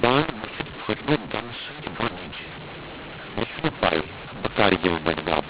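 From start to end, the speech carries a mu-law and A-law mix-up. The samples were coded with the mu-law curve of G.711 but expanded as if they were A-law. The two laws map codes to levels differently, so amplitudes come back scrambled. Some peaks grow too loud, others shrink. The quietest samples jump well above silence. The result is harsh, gritty distortion throughout, and the pauses fill with noise. The band stays limited to 4 kHz, as telephone audio should.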